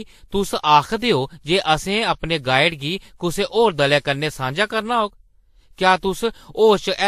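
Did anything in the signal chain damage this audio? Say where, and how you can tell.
Yes. Transcoding between lossy codecs runs throughout the speech at the codec stage. Nothing is present above 15.1 kHz, and two kinds of coding artefacts overlap, likely from a WMA-like encode re-encoded as low-rate Vorbis.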